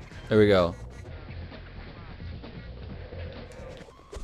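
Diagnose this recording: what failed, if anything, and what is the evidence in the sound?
The failure is at the radio receiver: digital radio blending to analogue. At 1.00 s the sound cross-fades over about 139 ms to the AM broadcast, returning at 3.57 s. Hiss rises to roughly 30 dB below the signal. Level shifts by about 1 dB.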